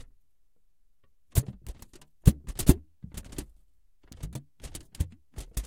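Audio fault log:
4.12 s, electrical switching spike: a sharp snap sits on top of the sound, over in a few milliseconds and peaking at roughly -25 dBFS. That very short, hard-edged transient with nothing musical about it is the classic mark of a brief arc getting into the audio line, likely from a nearby switch, motor or static discharge, rather than anything in the sound itself.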